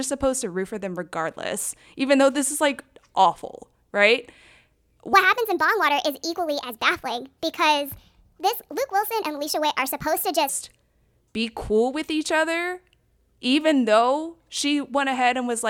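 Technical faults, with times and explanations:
5.13 to 10.49 s: section at the wrong speed. This stretch of speech runs 1.48 times faster than recorded, so pitch climbs about seven semitones together with the tempo, leaving it high and hurried, likely from being played or resampled against the wrong clock.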